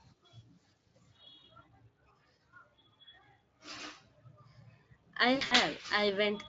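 At 5.35 to 5.54 s, VoIP packet loss concealed by the speech codec: 120 ms of audio dropped out across 160 ms, in runs up to 60 ms. The Speex decoder extrapolated its last pitch and filter at falling gain, so speech smears into a fading buzz or noise and stays weak or distorted as packets resume.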